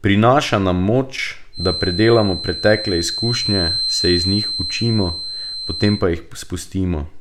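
From 1.51 s to 6.07 s, a thin, steady whistle near 4.1 kHz sits behind the speech, only a few decibels below it and swelling and fading slowly in level. This feedback whistle likely comes from a loudspeaker-to-microphone loop held just short of runaway howling.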